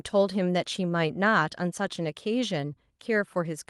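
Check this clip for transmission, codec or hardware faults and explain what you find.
Checking the clip turns up nothing to report, so there are no faults to explain.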